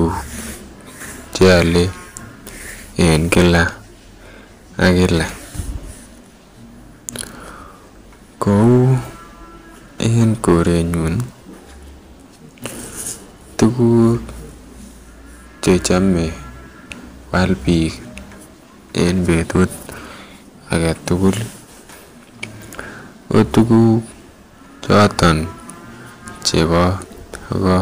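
Hard clipping runs through the whole speech clip. The signal is driven about 13 dB past what a stage can pass, so peaks are cut flat, with around one percent of samples hitting the ceiling. Flattened tops add high harmonics, heard as harsh crackle on loud syllables.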